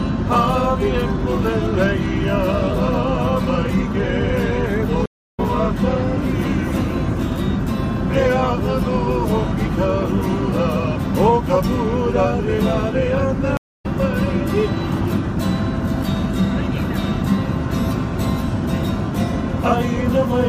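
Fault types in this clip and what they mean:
stream reconnect: the connection dropped and a fresh decoder restarted mid-stream, leaving silences of 312 ms at 5.06 s and 259 ms at 13.57 s. Sound resumes roughly a fifth of a second further on. The waveform and spectrogram show flat, empty gaps, then a fade-in as sound returns.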